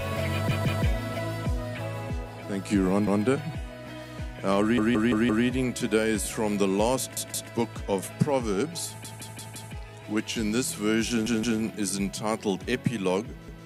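Right from 0.51 s you get a repeated buffer, and it keeps coming back at 3.07, 4.78, 7.17, 9.05, 11.26 and 13.48 s. The playback ran dry, so the device looped the last chunk of about 171 ms, which fits an 8192-sample buffer, before fresh audio caught up. Each one is a short stutter with a hard seam at every repeat: one extra play at 3.07 and 13.48 s, two at 0.51, 7.17 and 11.26 s, and four at 4.78 and 9.05 s.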